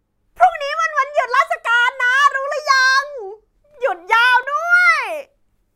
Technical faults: block of digital silence

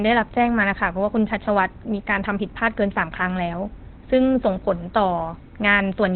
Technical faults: Opus compression

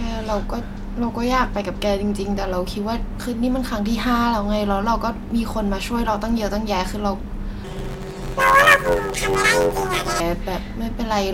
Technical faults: planar audio read as interleaved

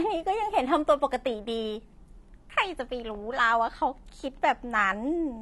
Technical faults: AAC compression

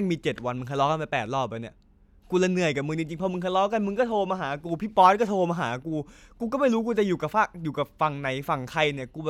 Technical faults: none

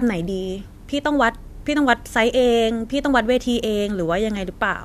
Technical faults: none

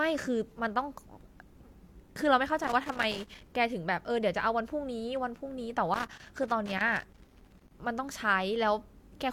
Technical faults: loose connector crackle

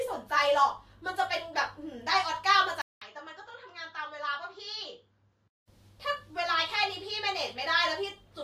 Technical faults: input switched to a poorer device

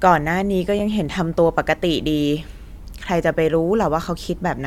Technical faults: gap between stream segments

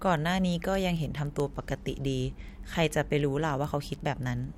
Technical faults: word clock ticks

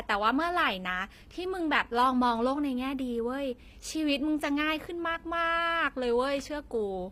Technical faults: HE-AAC compression

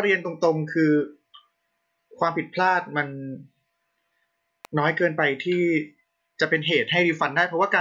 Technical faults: electrical switching spike

